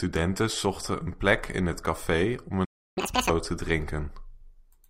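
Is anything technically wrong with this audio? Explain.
Yes, the speech has two linked faults.

A playback stall runs from 2.64 to 2.98 s: the speech stops mid-flow for about 0.32 s, most likely because the player ran dry or its thread was blocked. The waveform shows a flat gap, and the spectrogram shows an empty column.

Catch-up at higher speed follows from 2.98 to 3.30 s, as the player resamples its backlog at 2.0x. Speech sounds hurried and nearly an octave higher. Harmonics sit well up the spectrogram, and the waveform is visibly compressed in time.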